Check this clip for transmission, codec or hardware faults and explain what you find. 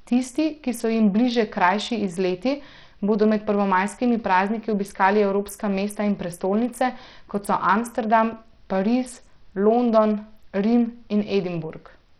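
One fault runs through the whole speech clip: heavy Bluetooth SBC compression, likely from a starved bit pool, which fits a link near 64 kbps. The weak top sub-bands get almost no bits, so treble flickers in and out under gritty noise and aliasing, rather than the steady, clean roll-off of simple band-limiting.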